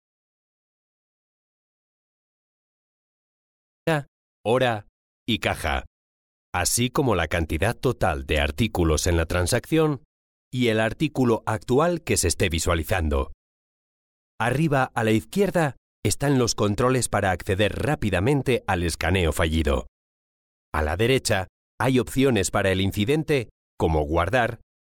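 From the very start until 3.87 s the clip is dead silent, with no room tone at all, and the sound then enters mid-flow. This is an audio dropout to silence, likely from the input being lost while the recorder kept writing zeros.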